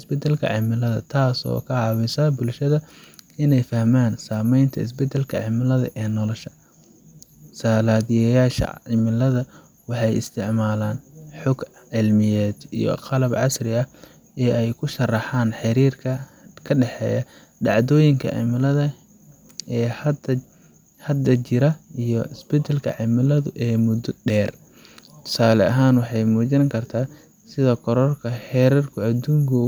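No technical faults can be heard in this recording.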